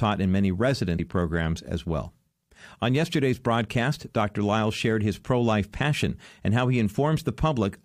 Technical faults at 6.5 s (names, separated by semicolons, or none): none